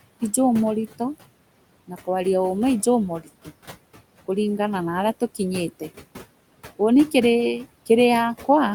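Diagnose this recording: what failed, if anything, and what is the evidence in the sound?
Noise suppressor artifacts from call processing run throughout the speech. The room noise sinks by about 17 dB between words and rises back under them, as the suppressor gates steady-noise bands frame by frame.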